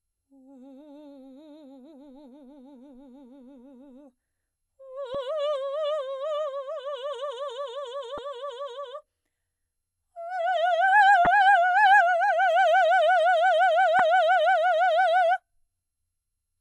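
Damaged data in a compressed stream causes brief chirps, squawks, clicks or short holes in the music at 5.14 s, 8.15–8.19 s, 11.24–11.27 s and 13.99 s, where corrupted frames throw the decoder out of sync.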